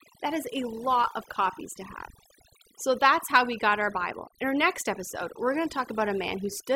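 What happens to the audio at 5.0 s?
At 5.0 s the speech is under overdone noise removal, a fault that runs through the whole clip rather than starting there. A noise reduction stage set far too aggressively pulls down any frequency band that sits close to its picture of the background noise, and the quieter parts of the voice are cut along with it. The result is a lowered background broken up into twinkling, warbling specks.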